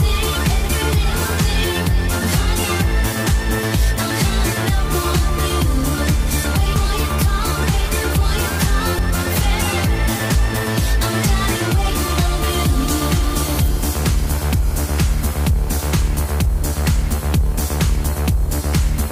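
The audio jumps forward twice, a sign of compressed frames skipped. At 6.76 s, roughly 0.3 s of sound goes missing. At 8.99 s, about 0.2 s disappears. Each gap matches a whole number of frames, about three and then two, which fits a frame length near 93 ms. The frames were absent from the file or rejected by the decoder as damaged.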